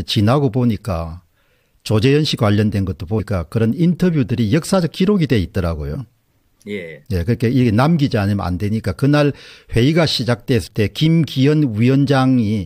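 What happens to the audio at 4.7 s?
Nothing goes wrong at 4.7 s; the audio plays through that moment intact, with no dropout, click or distortion.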